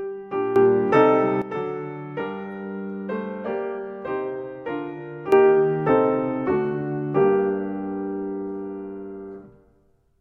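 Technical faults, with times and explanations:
0.56–1.42 s and 5.32 s to the end: sudden gain jump, the sound and its background noise step up together by about 12 dB in a single instant, likely from a gain setting applied with no ramp; unlike a fade or compressor action, there is no gradual change.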